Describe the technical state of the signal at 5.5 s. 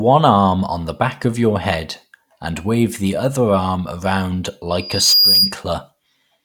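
At 5.5 s the speech is inside a loudspeaker feedback squeal running from 4.79 to 5.58 s, just after "the other arm around". A 4.8 kHz tone swells over roughly 0.4 s to sit a few dB above the speech. That self-building rise, rather than a steady whine, marks a mic-to-speaker gain loop.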